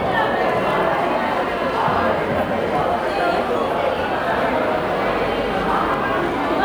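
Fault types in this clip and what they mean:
Doubled audio track: from about 4.30 to 5.94 s a second full-band copy of the sound trails roughly 150 ms behind, around 5 dB quieter, with no room colour, cutting in and out abruptly. Likely a slower second capture path or a misaligned edit.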